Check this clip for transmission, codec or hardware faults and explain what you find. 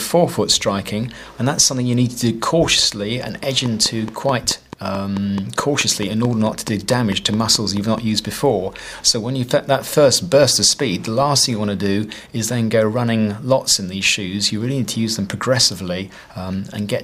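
There is one fault. From 3.43 to 7.99 s a train of clicks ticks evenly over the sound, about 4.6 per second, around twenty alike pops standing roughly 10 dB above it. The likely cause is interference from nearby equipment or a faulty connection or power supply repeatedly injecting a pulse.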